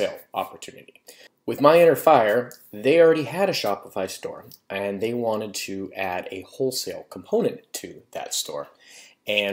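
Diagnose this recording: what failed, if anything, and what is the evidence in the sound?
Nothing in the signal points to a failure at any stage, from capture through conversion and transport to playback.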